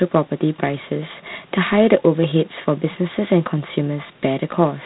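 G.726 ADPCM damage runs through the whole of this speech clip. Each sample is coded as a few bits of difference from an adaptive prediction, and the rasping hiss that follows the speech level points to the 24 kbit/s mode. Nothing passes above 3.9 kHz.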